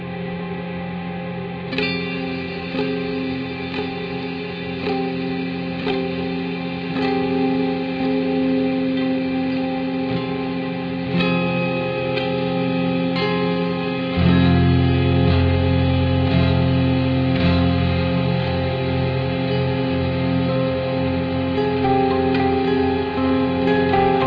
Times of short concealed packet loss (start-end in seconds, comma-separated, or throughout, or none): none